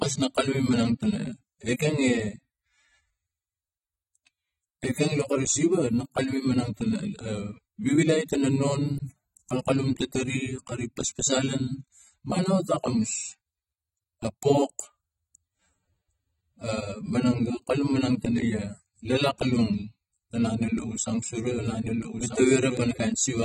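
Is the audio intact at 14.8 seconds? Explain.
No. Throughout the clip, including 14.8 seconds, the speech shows AAC compression damage, likely from AAC-LC coding at a bitrate around 24 kbps, which quantises the spectrum coarsely. Nothing remains above 16.1 kHz, and the speech sounds dull and smeared, with a warbling, fizzy texture on sibilants.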